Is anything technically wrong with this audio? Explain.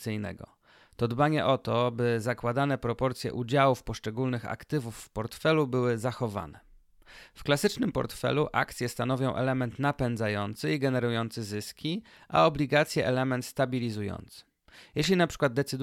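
No, nothing is technically wrong with this audio.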